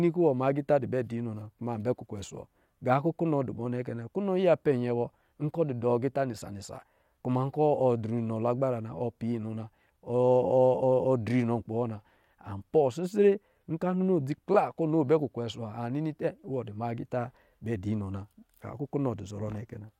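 Listening to this speech recording, nothing technical stood out.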